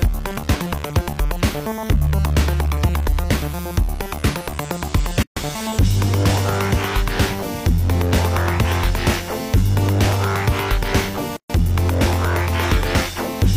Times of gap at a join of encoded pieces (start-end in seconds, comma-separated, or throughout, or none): 5.23-5.37, 11.37-11.50